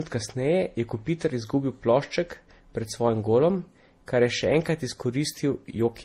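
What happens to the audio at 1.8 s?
At 1.8 s the speech carries the same layered coding damage heard across the whole clip. Nothing sounds above 15.8 kHz, and the artefacts of the different codecs are heard together. This points to transcoding between lossy codecs, likely a low-rate MP3 pass followed by Opus and then Vorbis. Each later encoder spent bits re-coding the earlier artefacts and added its own, so the distortions stack.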